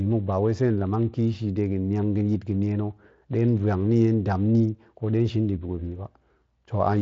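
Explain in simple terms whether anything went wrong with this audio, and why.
Nothing went wrong with this speech recording. It has passed through the Speex voice codec, which leaves a light compressed texture and cuts off the highest sounds above about 7.6 kHz, as this kind of voice-chat coding normally does.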